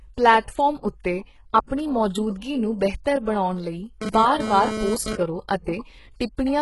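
Throughout this speech recording the treble sounds gritty and metallic, sibilants come out lispy, nothing reaches above 11.5 kHz, and the codec damage is heavy. This is likely HE-AAC compression at a very low rate, fitting roughly 12 kbps. The upper band is rebuilt by spectral band replication, which copies lower bands upward under a coarse envelope, so its harmonics fail to line up with the real ones below. From 1.67 to 1.71 s a brief hiss of about 35 ms runs ahead of an attack, smearing its onset. This is pre-echo: the transform spreads its quantisation noise across the whole block, so noise sized for the loud attack also fills the quiet moment before it. From 4.02 to 5.16 s a hard, raspy buzz at 217 Hz with many harmonics comes and goes, about 5 dB below the signal. This is GSM phone buzz from a nearby 2G handset transferring data, its 217-per-second radio bursts rectified by the audio circuitry.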